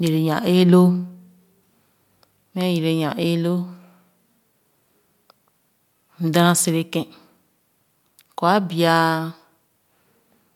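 A speech recording with nothing technically wrong to point to. No dropout, distortion or timing disturbance can be heard at any point.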